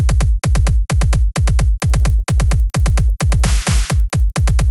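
From 1.8 s to the end, the resampler restarted on every block. Each 100 ms block was converted without its neighbouring samples, leaving edge errors heard as 10 Hz ticking under the sound.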